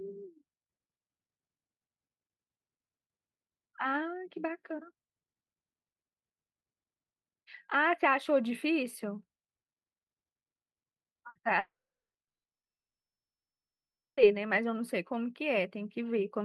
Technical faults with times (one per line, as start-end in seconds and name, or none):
11.29-11.38 burst of packet loss
11.59-14.20 long network dropout